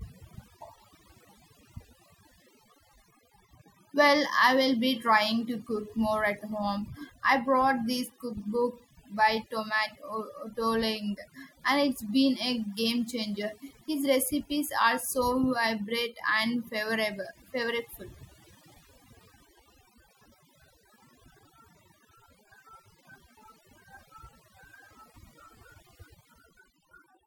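A speech recording with overdone noise removal running from start to finish. Between phrases the background drops to an unnaturally dead hush sprinkled with glittery, chirping fragments. A noise reducer was pushed too hard: every frequency band sitting close to its noise estimate gets clamped down or switched off, so the softer components of the voice are stripped out along with the noise, leaving isolated bands flickering on and off.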